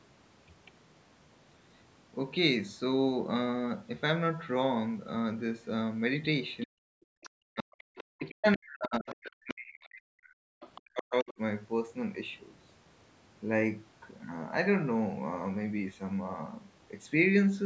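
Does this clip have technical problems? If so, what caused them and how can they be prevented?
Yes. Five faint scraps of the other side's voice leaking through can be heard: briefly at 6.61 s, then at 7.22 s, 7.96 to 8.32 s, 9.09 to 9.54 s and 10.61 to 10.81 s. They sit about 20 to 25 dB below the talker. The likely cause is loudspeaker sound reaching the microphone and not being fully cancelled. A headset would prevent this.

There is also speech suppressed in double talk. The voice drops briefly at 6.65 to 6.8 s, then between 7.44 and 11.39 s, for about three seconds in all. Dips reach around 40 dB. This is likely the echo canceller turning everything down while both sides talked. Better double-talk detection or a headset would help.

The background is gated by the echo canceller at 7.08 to 7.16 s. The room sound drops about 39 dB for under a tenth of a second while the loudspeaker plays, then returns. 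A gentler suppression setting in the canceller would prevent it.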